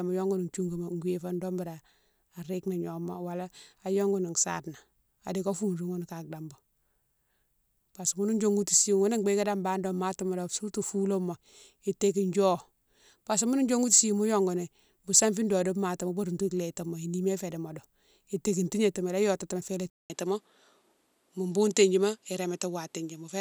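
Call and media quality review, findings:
Input likely switched to a poorer device at 19.90 s, after "yotatimo fo ila", through clip end. About 200 ms silence at switch; speech then band-limited, nothing above 12.7 kHz, duller tone, new faint noise floor, level essentially unchanged.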